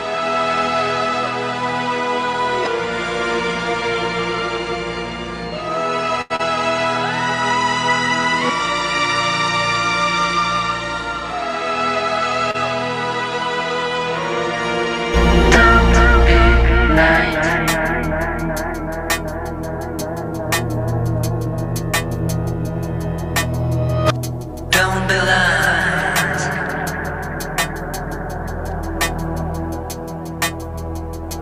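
From the start to 15.14 s the sound is duller and quieter: nothing reaches above 9.7 kHz, the level sits about 10 dB lower, and a new noise floor runs about 45 dB below the signal. At 15.14 s it clears abruptly, with no gap. This is likely an input switched to a poorer device for that first stretch.

At 6.21 to 6.32 s there is a short stall from a late packet. The receiver held the last sound for 85 ms while waiting, so one moment drags with a slight buzz or dip, though nothing is lost and the delay grows by 85 ms.

Just after, from 6.36 to 6.41 s, a short concealed packet loss leaves 40 ms of audio missing. The receiver covered 30 ms of it by extending the preceding sound, producing a brief smear before the real audio resumes.

A second stall at 12.51 to 12.56 s holds the sound for 33 ms, a smaller drag that adds 33 ms of delay.

From 23.89 to 24.67 s a jitter buffer speed-up trims about 50 ms by cutting out small pitch-period pieces, so this passage plays at 105% speed with unchanged pitch and sounds slightly rushed.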